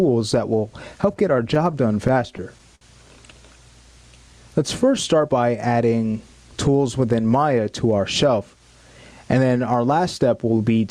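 The audio shows gain pumping throughout. The level swings by around 15 dB, bringing loud and soft parts closer together. The likely cause is gain set far too high, so a fast limiter keeps clamping down. Between 1.01 and 2.83 s there are repeated stalls (stutter). The sound hangs and drags eleven times, the longest hold lasting 59 ms. Nothing is lost. Late-arriving packets kept emptying the jitter buffer, so the receiver stretched the last sound while waiting.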